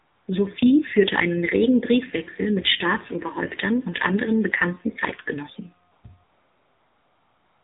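Throughout, the AMR narrowband mobile codec cuts everything above 4 kHz and rebuilds the speech from a coarse vocal-tract model, leaving it plainly buzzy and synthetic, consistent with a low rate near 7.4 kbps. AMR comfort noise appears three times, from 0 to 0.28 s, 5.92 to 6.04 s, and 6.24 s to the end. In each, speech frames stop and the receiver substitutes smooth synthetic noise that switches in and out abruptly.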